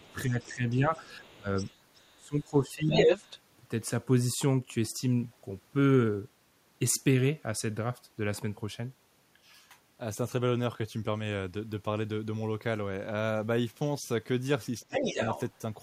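From 0.0 to 2.4 s, the other side's voice leaks through faintly. It returns louder than the talker from 2.9 to 3.4 s and slightly below the talker at 14.8–15.4 s. This is likely loudspeaker echo the canceller missed, and a spectrogram shows a second, unaligned harmonic stack.

Speech is suppressed in double talk at 0.09–1.48 s, 2.17–2.91 s and 14.83–15.2 s. The drops reach about 15, 15 and 30 dB, likely from the canceller ducking both voices. They appear as waveform notches with faded high-frequency bands.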